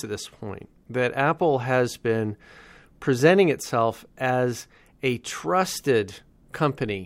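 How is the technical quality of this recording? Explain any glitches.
There are no glitches in this speech recording. Nothing along the recording and playback chain can be heard to disturb the sound at any point.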